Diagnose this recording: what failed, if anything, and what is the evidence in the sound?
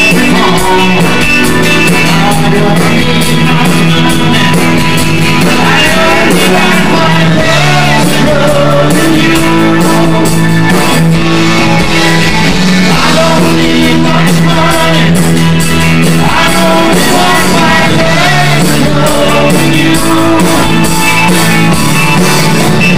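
Hard clipping runs through the whole recording: every loud passage carries a harsh, fuzzy edge, because the signal is being driven about 10 dB beyond what a gain or conversion stage can pass, most likely the converter input or a fixed-point format stage. Roughly a fifth of the samples sit at the limit. On a waveform the peaks are sliced into flat plateaus. A spectrogram shows smeared harmonic energy climbing into the high kHz range on each loud moment.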